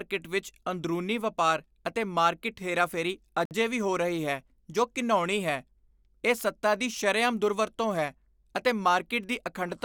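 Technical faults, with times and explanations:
3.45–3.51 s, gap between stream segments: after "ਵਪਾਰ ਅਤੇ ਮਾਰਕੀਟ ਹੇਰਾਫੇਰੀ" the speech cuts to about 55 ms of silence before "ਵੀ ਹੋ ਰਹੀ ਹੈ". Mismatched segment timestamps leave a hole the player pads with silence; no speech is lost. The waveform shows a hard-edged flat line, and the spectrogram a blank vertical band.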